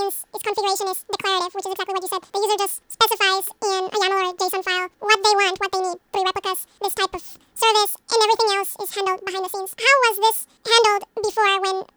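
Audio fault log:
throughout: audio read two samples at a time (double speed). The reader treats each consecutive pair of samples as a single frame, as if the stream held two channels or samples twice the real width, so it steps through the data twice as fast. The speech plays at 2x speed and 12 semitones (one octave) higher, giving a clipped, chipmunk-like delivery.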